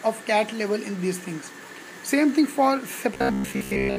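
Robotic sound from repeated short buffers runs from 3.14 s to the end of the clip at 3.99 s. The sound collapses into a rigid, metallic buzz at 66.8 Hz that only loosely tracks what came before. The likely cause is audio arriving too seldom, so playback keeps looping a fragment of roughly 15 ms, with about 70% of the passage replaced by these repeats and the real audio skipped.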